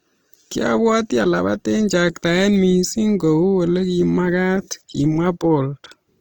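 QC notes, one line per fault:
throughout: Opus compression. The speech sounds plainly rough and grainy, with tonal parts turned noisy rather than swirly, though content still reaches about 20.2 kHz. This likely comes from Opus in its CELT music mode at a bitrate near 24 kbps, filling starved bands with folded or noise energy.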